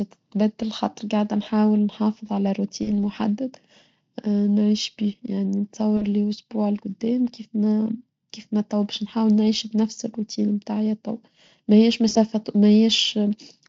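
VoIP packet loss concealed by the speech codec hits at 2.83 to 2.91 s, 5.97 to 6.03 s and 12.09 to 12.17 s, dropping about 40, 40 and 60 ms. The decoder extrapolates from its last state, so the speech smears into a fading buzz or coloured noise that takes a moment to recover.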